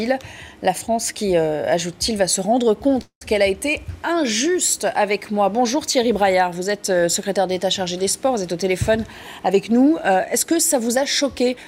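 At 3.01 s the sound stalls until 3.24 s, a call audio freeze. Packets were likely held up, emptying the jitter buffer. The last sound is stretched into a fading buzz, ending in about 90 ms of silence. Playback then resumes where it stopped.

From 9.39 s to 11.65 s a jitter buffer speed-up follows. The buffer had grown too full. Short pitch-period slices were cut repeatedly, roughly 150 ms in total. The sound runs at 107% speed, same pitch, and feels hurried.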